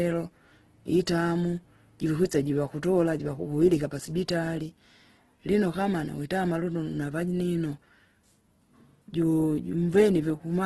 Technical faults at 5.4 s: Opus compression

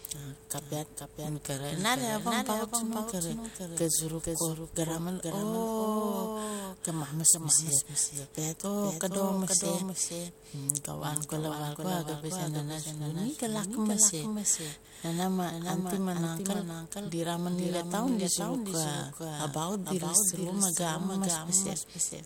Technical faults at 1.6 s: doubled audio track

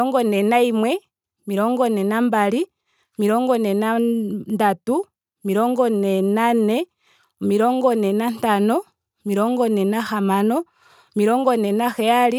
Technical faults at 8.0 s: none

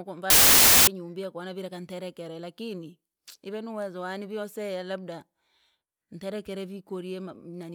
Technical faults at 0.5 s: samples built from the wrong bytes

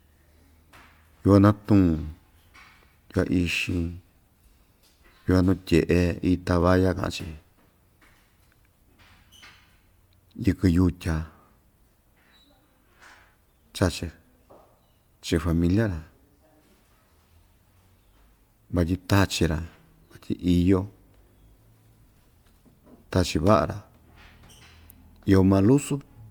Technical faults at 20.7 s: generation loss

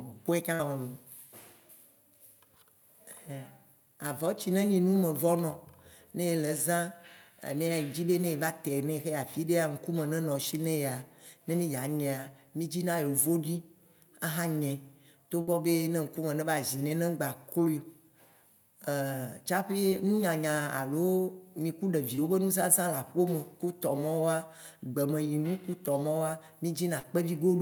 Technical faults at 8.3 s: none

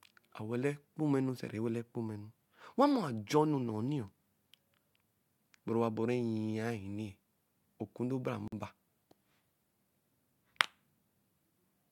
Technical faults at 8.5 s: gap at a join of encoded pieces

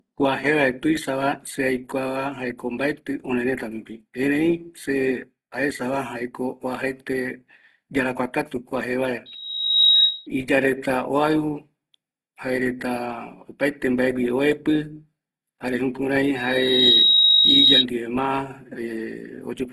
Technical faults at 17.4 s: low-bitrate audio saved at a high bitrate; loudspeaker feedback squeal

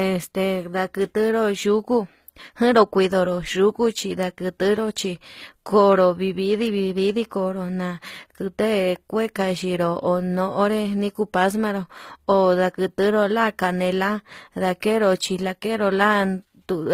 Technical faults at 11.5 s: transcoding between lossy codecs

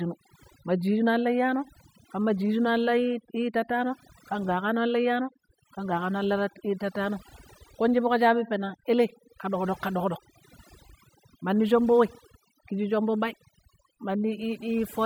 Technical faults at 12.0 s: overdone noise removal

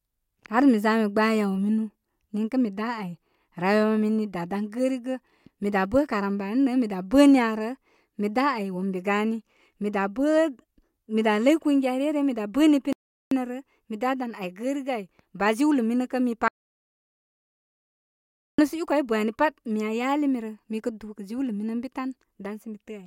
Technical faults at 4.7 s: none

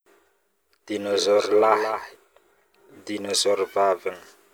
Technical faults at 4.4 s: none

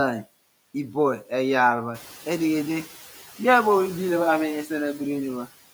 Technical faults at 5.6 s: noise suppressor artifacts

